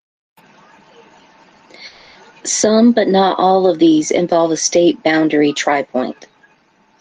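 At 1.87 s the speech breaks off until 2.17 s, a long network dropout that likely comes from a stretch of lost packets. The final sound is extended as a fading buzz for about 280 ms, smearing into flat, decaying bands on a spectrogram, and then the speech resumes with that part missing.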